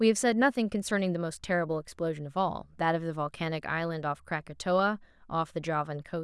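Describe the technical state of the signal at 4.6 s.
At 4.6 s the speech signal is intact, with no audible fault.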